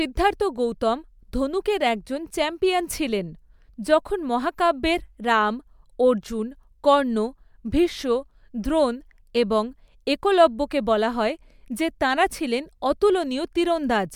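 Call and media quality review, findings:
No audible faults found in the speech recording.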